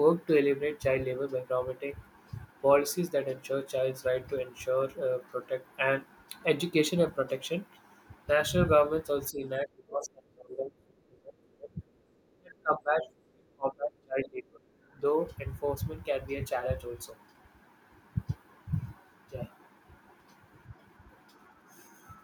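From 9.31 to 11.91 s, the talker's level falls away in pieces, sinking by roughly 25 dB at its deepest. It happens again from 12.4 to 13.09 s and from 13.31 to 14.61 s, each time dropping by around 30 dB. The sound thins and breaks up rather than fading smoothly. This is speech suppressed in double talk. Both ends were likely talking at once. The echo canceller could not tell the local talker from the far-end echo, so it pulled everything down.

At 14.91 to 14.95 s, the room sound briefly dips by about 6 dB for roughly 40 ms, then comes straight back. This is background gated by the echo canceller. While the loudspeaker played, the canceller clamped the microphone for an instant. The ambience ducks for that moment and recovers once it releases.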